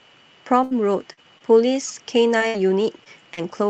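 At 0.63 s a burst of packet loss opens a hole of roughly 80 ms, ending at 0.73 s. The receiver fills about 73 ms of it by extending the preceding sound and letting it decay, so the audio turns into a held buzz or fading hiss before jumping ahead. On a spectrogram the harmonics freeze into flat horizontal bands that fade, and the waveform's envelope tapers smoothly instead of following the speech. The final 20 ms of that stretch, from 0.71 to 0.73 s, is a lost packet rebuilt from error correction: a coarse Opus copy that restores continuity but sounds grainier, with smeared, noisier texture in the spectrogram.

Short concealed packet loss follows at 1.13–1.25 s, where about 40 ms of audio never arrived and roughly 43 ms was synthesised, adding a little extra length. A second one at 1.38–1.42 s replaces about 20 ms. Each is a brief smear or wobble. The spectrogram shows a short blurred patch where the harmonics briefly repeat, and the waveform has a small glitch at the rejoin.

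Three more single lost packets rebuilt from error correction sit at 1.58, 1.64 and 1.88 s, 20 ms each. No gap opens, but each frame sounds momentarily rougher. In the spectrogram they appear as thin vertical slivers of grainier, less defined energy below the 8 kHz ceiling of this call path, a ceiling that points to a wideband Opus setting near 40 kbps.

From 2.38 to 3.42 s comes repeated packet loss, giving a robotic sound: four separate gaps, the longest 60 ms, lose about 140 ms in total. Roughly 129 ms of that is patched by extending the preceding sound, so about 13% of the stretch is concealed. The result sounds choppy, with pieces missing. On a spectrogram, frozen striped segments alternate with normal speech, and the waveform shows repeated flattened, periodic sections.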